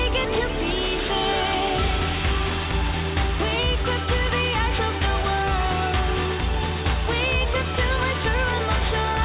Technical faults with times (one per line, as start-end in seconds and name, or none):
0.00-9.25 aliasing